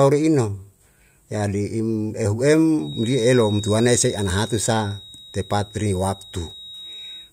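From 2.77 s to the end of the speech, a feedback whistle sits behind the talker: a thin, steady tone at 3.8 kHz, roughly 20 dB below the speech, swelling and fading slowly in level. It is likely a loudspeaker-to-microphone loop held just short of runaway, so one frequency keeps ringing without building. Unlike full howl-round, it never swells to dominate, and unlike mains hum or buzz it is a single high pitch that drifts in level.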